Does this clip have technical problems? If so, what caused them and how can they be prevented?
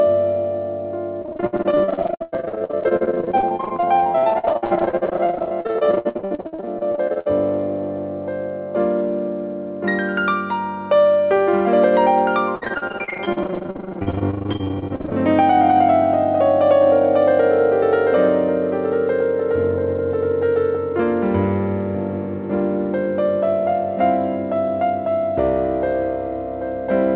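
Yes. Repeated packet loss (robotic sound) occurs from 1.22 to 7.27 s and from 12.55 to 15.13 s. Gaps of up to 100 ms are patched by extending the last sound, which produces a choppy stutter rather than clean silent dropouts. A steadier network link or a larger jitter buffer prevents it.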